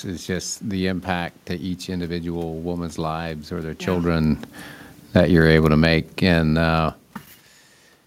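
From 5.01 to 7.04 s the automatic gain falls by about 4 dB as the control reacts to an input it finds too loud or too noisy, so the speech and room noise sink together.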